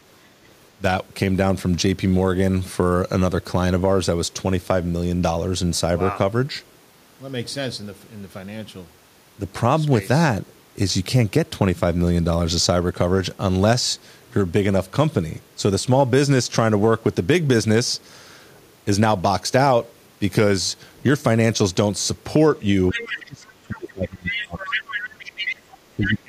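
From 22.91 to 23.14 s, the echo canceller likely failed to fully remove the loudspeaker playback from the microphone, so the other side's voice leaks through. It is a brief second voice sitting about 10 dB under the talker. Further leaks follow at 24.30 to 24.43 s and 24.60 to 25.56 s, the longer one louder at around 5 dB below the talker. A faint trace about 30 dB under the talker appears at 25.72 to 25.77 s, and a short, fairly strong burst at 26.09 to 26.14 s.

Overlapping these leaks, speech is suppressed in double talk from 22.92 to 25.31 s. With both sides talking at once, the canceller likely could not tell its own talker from the echo and pulled the whole signal down. For roughly two seconds the talker's voice dips, falling by around 25 dB at its deepest. The same happens again from 25.95 s to the end of the clip, a short dip of roughly 30 dB.

Between those two stretches, from 25.59 to 25.67 s, the background is gated by the echo canceller. 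It clamped the microphone hard while the loudspeaker was active, so the room sound drops by about 10 dB for about 70 ms. The ambience ducks, then springs back as the canceller releases.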